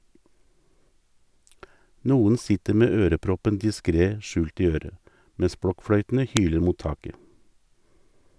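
At 6.37 s, right before "hyler mot", there's a sharp, loud snap. That's a file header played as audio: two WAV pieces got joined without stripping the second one's header, so those few dozen bytes of metadata went out as samples, giving a brief spike unrelated to the speech.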